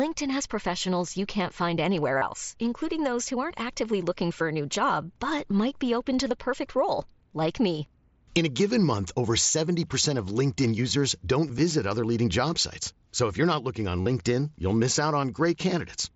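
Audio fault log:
2.18 to 14.06 s, concealed Bluetooth headset packet loss: three short gaps where packets between headset and phone went missing. The first is at 2.18 s for 37.5 ms, after "find anywhere". The second is at 11.47 s for 22.5 ms, after "users don't". The third is at 14.02 s for 45 ms, before "you'll miss out". In each gap the receiver filled the hole by repeating the closest-matching slice of the preceding waveform, so each one comes through as a brief buzzy, held tone at full level. A slight warble follows as genuine audio resumes against the mSBC wideband path. The lengths fit runs of roughly three to six lost 7.5 ms packets.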